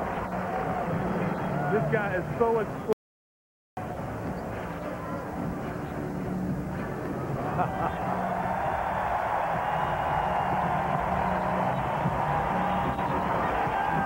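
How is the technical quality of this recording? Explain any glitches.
There's one real glitch: an audio dropout to silence from 2.93 to 3.77 s. The sound cuts to silence for about 0.84 s, likely an input link or device dropping out.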